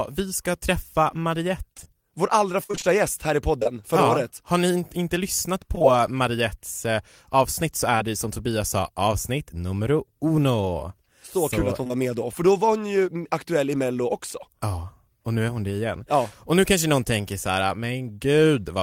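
From 1.73 to 3.67 s, just before "förra ja året", repeated packet loss (robotic sound) sets in. Ten gaps, the longest 55 ms, lose about 240 ms of audio. Each gap is filled by extending the preceding sound, giving a choppy sound with pieces missing. It happens again briefly from 5.75 to 5.85 s, after "ni inte lyssnat", with three gaps close together. The rapid run of patches, rather than one isolated hole, is what makes it sound robotic.

Short concealed packet loss occurs alone at 7.98 to 8.02 s, then twice back to back at 11.84 to 11.87 and 11.87 to 11.92 s, between "så kul att hon" and "med då för då". Each hole lasts about 20 ms and is filled with continued sound rather than silence. The result is a brief smear or wobble, not a hard dropout.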